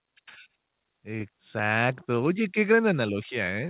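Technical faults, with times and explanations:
No technical faults are audible in this speech. It has come through a working call path whose band stops at about 4 kHz, which fits G.711 mu-law at 64 kbps.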